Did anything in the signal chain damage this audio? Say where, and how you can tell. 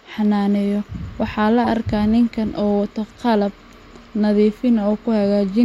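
Yes, at the codec: a corrupt frame decoded twice, a loud one at 1.64–1.67 s and a faint one at 4.01–4.03 s, each a single garbled frame.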